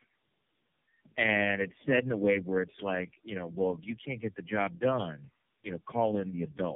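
Tandem speech coding runs from start to finish: the speech sounds like it crossed several network links in a row, each with its own low-rate speech codec, decoding and re-encoding at every handover. The roughness and warble point to about four such coders in sequence, likely alternating iLBC- and AMR-style coding. Each one models the previous coder's damaged output, so the speech comes out rough, muffled and warbly, and nothing reaches above 3.5 kHz.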